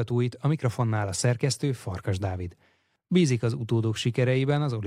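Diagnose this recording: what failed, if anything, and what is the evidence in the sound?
Nothing failed here: the speech signal is continuous and intact, with no fault audible at any stage of the chain.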